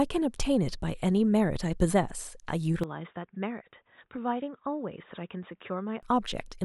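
At 2.84 s the speech suddenly goes dull and boxy, with nothing left above 3.8 kHz, and it drops roughly 10 dB in level, with no gap at the changeover. A faint new background noise comes in with it, well below the speech. That pattern points to an input switched to a poorer device, likely a different microphone or a headset's call profile taking over mid-recording. The fuller sound comes back at 6.03 s.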